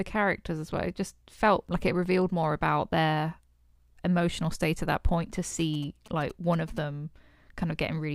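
GSM signalling bursts appear from 5.59 to 6.79 s: a galloping dit-dit-dit of short buzzes sitting roughly 20 dB below the speech. A nearby 2G phone is exchanging short signalling transmissions with the network rather than carrying a call, and the audio circuitry rectifies those radio bursts into sound. Each buzz is pulsed at 216.7 Hz, the GSM frame rate, giving it a hard, rasping texture.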